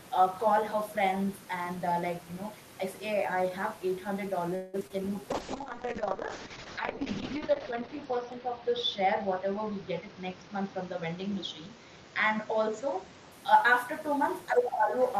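At 4.55 s the speech stops advancing for 0.18 s, until 4.76 s, and a fading continuation of the last sound fills the gap. This is a call audio freeze, likely caused by packets held up in transit until the jitter buffer ran empty. The receiver extended the final sound rather than going silent, and when the packets arrived the speech resumed where it had stopped, so nothing is lost but a gap has been inserted. On a waveform the envelope decays smoothly through the gap. On a spectrogram the last harmonics smear sideways and fade rather than ending cleanly.

Right after the freeze come two bursts of short concealed packet loss. At 4.80–4.82 s about 40 ms of audio never arrived, and the receiver covered it with only about 8 ms of synthesized continuation before blending back, so the delay built up by the freeze shrinks by roughly 30 ms and a fragment of the sound is skipped. At 4.87–5.01 s another 20 ms is missing, and this time 22 ms of fill stretches it slightly. 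Both are heard as a quick smear or wobble. A spectrogram shows short, blurred stretches where harmonics or noise are copied forward instead of changing naturally.

From 5.31 s to 13.38 s there is a call bitrate drop. The encoder is pushed from 32 kbps down to 6 kbps and stays at the lowest rate for 2.17 s. Coarser coding makes the speech rough and watery, and the audio bandwidth shrinks from 20 kHz to 6 kHz, so the speech also turns muffled. A spectrogram shows a hard ceiling near 6 kHz with empty space above it, plus blocky, patchy texture below, until the full bandwidth returns at 13.38 s.

Overlapping that stretch, from 9.52 s to 11.07 s, the speech plays at 108% speed with its pitch unchanged. This is a jitter buffer speed-up. The buffer held more audio than it was aiming for, so the receiver repeatedly cut out short pitch-period pieces, about 150 ms in total, to bring the delay down. 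The speech sounds slightly hurried. The waveform shows syllables packed closer together, and on a spectrogram the pitch lines stay level while the time between events tightens.

At 14.51–14.98 s the talker's level dips by about 10 dB over roughly half a second. The likely cause is the echo canceller hitting double talk: with both sides speaking at once, it could not separate this talker from the loudspeaker echo and turned everything down. The result is speech suppressed in double talk. On the waveform the envelope sags. On a spectrogram the energy thins.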